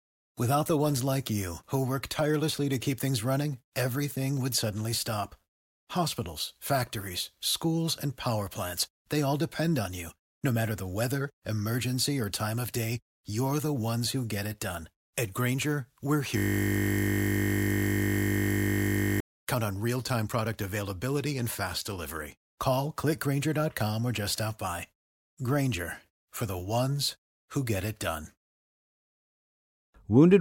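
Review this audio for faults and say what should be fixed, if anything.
There's a system hang loop from 16.38 to 19.20 s. The speech suddenly stops moving forward and a single 20 ms slice of audio repeats back to back, well over a hundred times, so you get a steady 50 Hz buzz for almost three seconds. That's the sound hardware cycling through the same ring buffer while the machine or driver froze. A loop this short points to a small buffer of about 20 ms. To prevent it, use a watchdog that mutes or zero-fills the output buffer when the audio thread stops updating it, and track down what stalled the driver.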